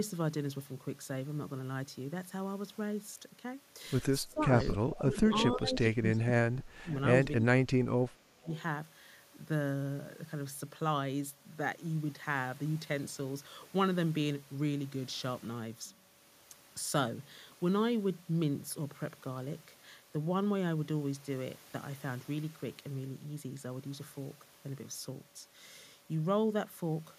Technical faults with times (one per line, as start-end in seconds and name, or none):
4.23-4.54 speech suppressed in double talk
4.58-4.70 echo leak
5.00-6.94 speech suppressed in double talk
5.53-5.57 echo leak
7.40-8.49 speech suppressed in double talk
8.54-8.62 echo leak